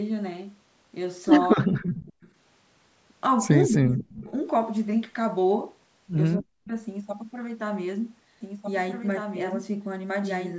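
A speech recording from a call where the echo canceller likely struggled with double talk: while the far side spoke, it turned the near talker down too, so the speech drops by roughly 35–40 dB or cuts out in pieces at 1.55–2.15 s, 3.68–4.36 s and 6.36–6.72 s. That same canceller likely failed to remove all of the loudspeaker pickup, causing an echo leak. A faint delayed copy returns 244 ms behind the speech at 2.21–2.3 s, about 35 dB down, and at 4.02–4.14 s, about 25 dB down. From 8.41 s to the end, a doubled audio track likely comes from a second, slower capture path: a full-band copy runs about 1.5 s behind at only about 5 dB below the original. It begins abruptly and has no decay or room colour. The call microphone processing keeps the band below 8 kHz.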